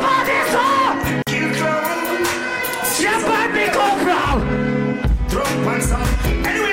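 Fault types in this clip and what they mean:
Bluetooth dropout: a 46 ms silent gap at 1.22 s, likely lost wireless packets; unlike a stall, the sound resumes further along rather than where it stopped.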